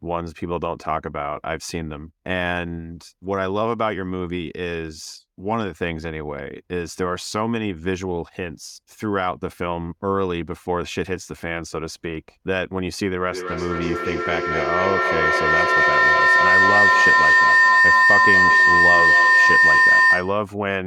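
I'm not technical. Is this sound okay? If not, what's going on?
No. Two devices in the same room seem to be on this call together, so sound from one loudspeaker is picked up by the other microphone and sent round again, louder each time. This is feedback howl. From 13.32 s to 20.51 s the speech is swamped by a rising, piercing whistle around 2 kHz that pulses roughly every fifth of a second and ends up clearly louder than the talking.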